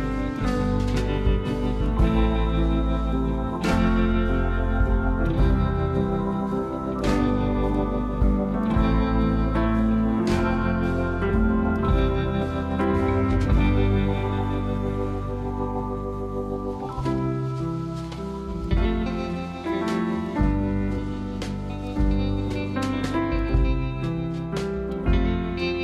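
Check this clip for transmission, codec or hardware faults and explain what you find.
Two brief codec faults: damaged data in a compressed stream at 11.29 s and 20.97 s. Corrupted bytes make the decoder misread frames and resync, producing short blips that appear as narrow broadband vertical streaks with abrupt waveform discontinuities.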